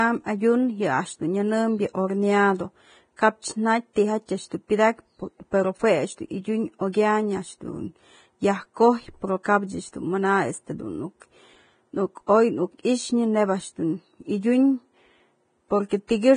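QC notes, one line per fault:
Throughout: Vorbis compression, likely at a low bitrate around 23 kbps. Nothing is heard above 9.7 kHz, so the speech sounds dull. The upper band is so coarsely quantised that fine detail turns to hiss and grain. Consonant attacks are smeared.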